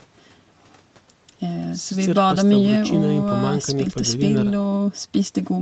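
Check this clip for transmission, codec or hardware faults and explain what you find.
Nothing stood out on listening to this speech, and its top end stopping at about 8 kHz is simply the normal bandwidth of the call path it went through.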